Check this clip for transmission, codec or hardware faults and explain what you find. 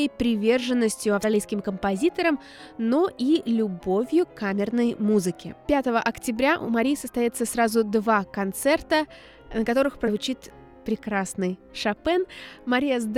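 The clip has one kind of fault, occurring twice. Compressed frames skipped at 1.23 s and 10.07 to 10.10 s: whole coded frames were lost or rejected, so the audio jumps ahead, roughly a tenth of a second first, fitting about five 20 ms frames, then about three.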